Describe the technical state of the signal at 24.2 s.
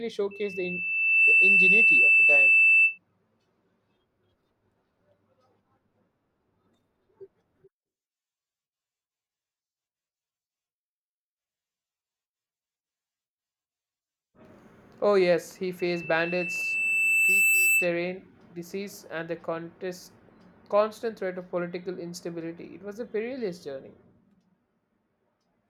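At 24.2 s the speech signal is intact, with no dropout, distortion or other audible fault.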